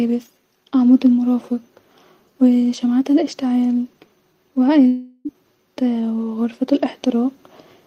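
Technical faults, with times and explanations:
4.87–5.27 s, long network dropout: the speech is replaced by a fading, buzzy continuation of the last sound for about 375 ms, with no silent gap, then resumes with 380 ms lost. This is likely a stretch of undelivered audio papered over by receiver concealment.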